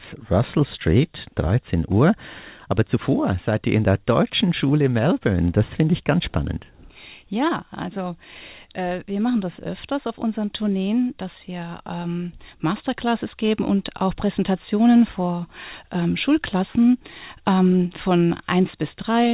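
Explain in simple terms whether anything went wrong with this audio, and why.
Nothing went wrong with this audio; it simply has the narrower sound of an ordinary phone call, with nothing above 4 kHz.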